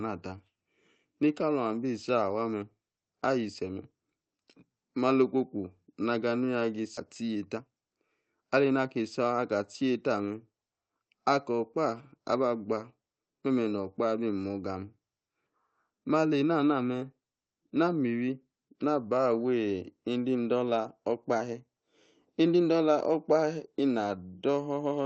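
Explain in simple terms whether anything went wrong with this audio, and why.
Skip ahead, from 6.97 to 6.99 s: roughly seven-tenths of a second of speech never reached playback. It was lost on the way or thrown out when the receiving buffer overflowed, so the sound jumps straight from before the gap to after it, with no pause where the missing part should be.

Jitter buffer speed-up, from 7.21 to 9.0 s: right after the jump, the receiver was holding more audio than it wanted. To catch up, it repeatedly snipped out tiny slices of the sound, about a third of a second in total. For those moments the speech plays about 15% faster, hurried but at normal pitch.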